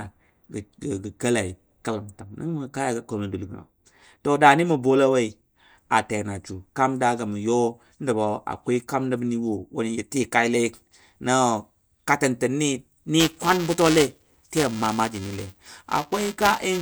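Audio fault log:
13.20–16.82 s buffer tearing: the writing program and the playback hardware have slipped into each other, so each period a small slice of the buffer replays audio from one lap earlier. Hard joins repeating at 375 Hz, fitting a 128-sample buffer, put a robotic buzz over the speech.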